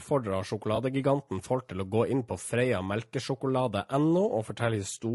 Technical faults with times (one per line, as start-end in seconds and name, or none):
0.00-5.14 low-delay AAC compression
0.75-0.78 AAC frame loss with concealment